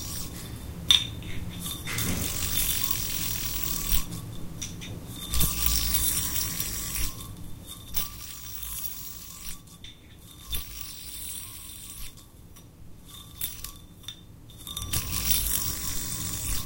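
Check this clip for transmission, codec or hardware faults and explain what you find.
One fault is audible: zipper noise from 14.49 to 15.05 s. A gain change of about 10 dB was applied in unsmoothed 2 dB jumps, around ten per second, rather than as a continuous ramp. Each abrupt jump leaves a small click, so a rapid ticking, zipping texture rides on the sound while its level moves.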